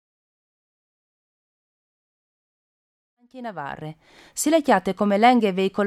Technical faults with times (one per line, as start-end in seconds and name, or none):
none